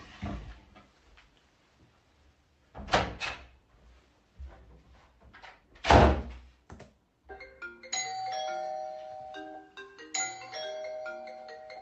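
The everyday sound arrives through a working call path with its top end rolled off near 8 kHz, consistent with Opus at about 32 kbps, and no faults can be heard anywhere in it.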